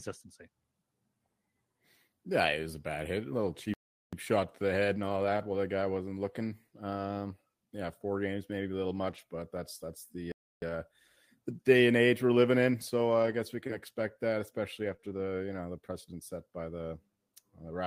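At 3.74–4.13 s the audio stops dead for about 0.39 s and then resumes, a playback stall, likely the player running out of data or being blocked. From 4.96 to 5.38 s, after "shot to the head", comes a lost packet rebuilt from error correction. The decoder played the low-bitrate copies carried in following packets, so there is no gap, only a rougher, noisier stretch. The same happens at 9.08–9.18 s, between "games maybe a little" and "but that's that's". A second stall silences 10.32–10.62 s, about 0.30 s. Further rebuilt stretches follow at 13.23–13.37 s and 14.85–14.95 s. After "can expect that especially", short concealed packet loss at 14.97–15.00 s and 15.00–15.04 s fills two 20 ms holes by extending the preceding sound. This gives a brief smear. A final rebuilt stretch runs 15.04–15.22 s.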